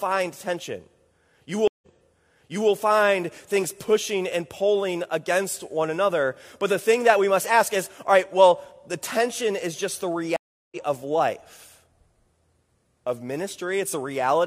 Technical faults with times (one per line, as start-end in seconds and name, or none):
1.68-2.70 stream reconnect
10.36-10.77 stream reconnect